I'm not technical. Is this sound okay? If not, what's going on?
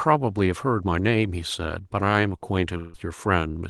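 No. Around 2.77 to 2.96 s the speech briefly smears into a fading buzz, then resumes with a bit missing. That's likely a long network dropout.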